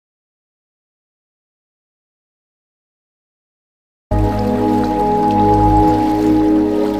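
The input feed was already lost when the recording began, most likely a disconnected device, a broken link or a mute left engaged, while the recorder kept writing silence. The result is an audio dropout to silence running from the very start to 4.11 s: total silence with no room tone at all, after which the sound comes in abruptly mid-flow, with whatever preceded that point missing entirely.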